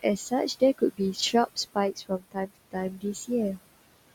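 Noise suppressor artifacts run through the whole speech clip. The suppressor pulls the room noise, which sits about 17 dB below the speech, down by about 20 dB between phrases and lets it rise under them.

Speech cut by the noise suppressor appears from 0.78 to 2.76 s, where the processor mistook roughly 0.7 s of quieter speech for noise and dropped it by up to about 21 dB. Again from 2.97 to 3.3 s, a brief stretch near a tenth of a second sinks by up to about 16 dB. Both passages sound swallowed and faint.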